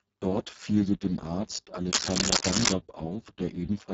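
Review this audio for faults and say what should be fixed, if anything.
The speech is heavily damaged by the Speex codec throughout. Its CELP coding has too few bits for the excitation, so the voice sounds hoarse and noisy, which fits a bitrate near 6 kbps. Content stops at 7.7 kHz, and the band above 4 kHz is only noise-like fill. Prevention: encode at a higher Speex quality setting, or use a modern wideband codec such as Opus.

Cable scratch noise runs from 1.91 to 2.74 s as dense, uneven bursts of scratching, somewhat louder than the speech. The likely cause is a worn cable, connector or control being moved, so that its contact resistance changes rapidly. Prevention: replace or reseat the faulty cable and connectors, and keep them still while recording.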